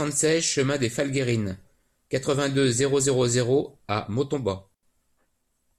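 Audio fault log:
4.74–4.83 s, digital wireless dropout: the receiver lost too much of the radio link's data and muted the speech for about 86 ms. A clean near-silent hole with no noise burst on either side; the waveform falls flat and the spectrogram shows a blank vertical gap across all frequencies.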